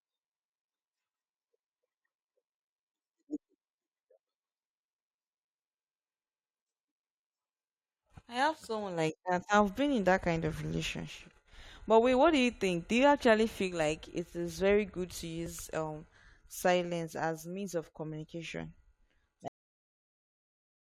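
It's a speech clip with two little skips from overlap between stream segments: one at about 9.47 s, right after "have someone like that", and another at 15.46 s, after "is very good to". Each is a tiny skip where up to about 15 milliseconds went missing because the player trimmed what it took for duplicated audio at a segment boundary. They land about 6 s apart, which fits 6-second segments. Then there's a cut-off end: at 19.48 s the audio stops mid-sound and drops straight into digital silence with no decay, so the final buffers were never written out.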